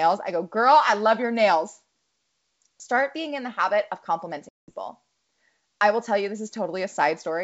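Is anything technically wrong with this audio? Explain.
Yes. From 4.49 to 4.71 s there is packet loss on an ADPCM call, leaving a hard-edged silent hole of about 190 ms, consistent with roughly twenty lost packets. The decoder's adaptive predictor and step size drift from the sender's, so the wideband G.722 speech resumes at the wrong level or with a click and slight distortion. This mistracking, which settles within some tens of milliseconds, sets it apart from a plain dropout.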